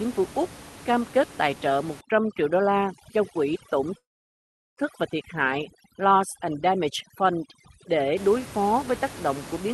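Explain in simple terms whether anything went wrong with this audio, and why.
Two things went wrong here. From about 2.0 s to 8.2 s there's overdone noise removal: the cleanup filter was pushed too hard, so along with the room hiss it shaves off the quieter parts of the speech. That leaves faint twinkly bits where the background used to be.

Inside that stretch, at 3.97 s, there's a call audio freeze. The sound stops, goes almost completely silent for about three-quarters of a second, and picks up again at 4.80 s right where it left off. Nothing is actually lost, but the rest of the audio now runs about 0.8 s late. The likely cause is network packets arriving late, so the call's buffer ran dry and had nothing to play.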